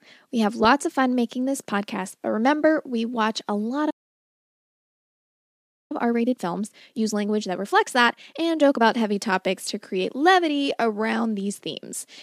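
At 3.90 s the speech stops dead and stays silent until 5.92 s. This playback stall lasts two seconds, likely because the player ran short of data. From 5.92 s to 8.92 s comes time-compressed catch-up. The player trims and cross-fades tiny slices, so the speech runs 1.25 times fast, hurried but unchanged in pitch.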